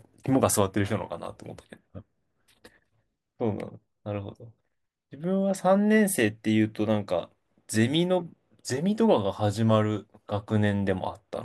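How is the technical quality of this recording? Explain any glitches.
No glitches turn up anywhere in the recording. There is nothing to explain, since the speech runs without a single technical fault.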